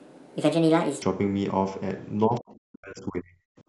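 A speech clip. The opening section, 0 to 1.02 s, was likely played against the wrong clock at 1.47 times speed, so the speech sounds hurried and about seven semitones too high. From 2.28 to 3.47 s, the echo canceller likely lost track during double talk and turned the near talker down, with dips as deep as roughly 40 dB and about a second of speech thinned or broken up. The call microphone processing takes out the lowest bass, which is normal.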